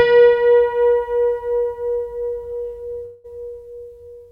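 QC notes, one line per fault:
3.05–3.26 s, call audio freeze: the last sound hangs as a fading buzz for about 0.19 s, then resumes intact, likely from late packets draining the jitter buffer.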